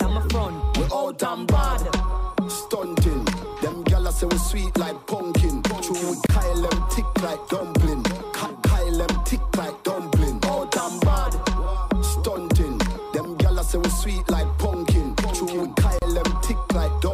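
Continuous sound breaks twice, at 6.26 s for about 28 ms and at 15.99 s for about 34 ms: gaps at a join of encoded pieces, where encoder delay and padding add silence. Unlike a dropout, the sound resumes exactly where it stopped.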